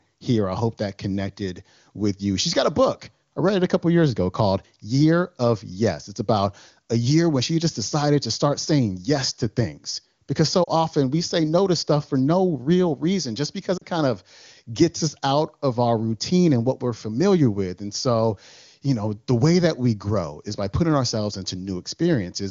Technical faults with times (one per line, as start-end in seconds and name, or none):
10.63-10.70 lost AMR speech frames
13.77-13.85 lost AMR speech frames